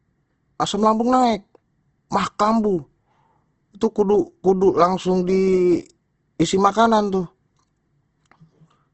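Throughout the speech, a hard spectral ceiling near 8.1 kHz and a grainy, rough texture point to likely Opus compression at a low rate, fitting about 16 kbps in CELT mode. Starved bands are filled with folded or noise content, so a spectrogram shows speckled, smeared harmonics under a flat cutoff.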